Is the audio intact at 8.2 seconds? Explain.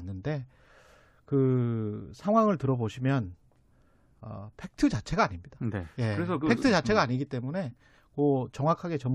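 Yes, the speech at 8.2 seconds plays through intact, with no dropout, click, distortion or other fault at that point.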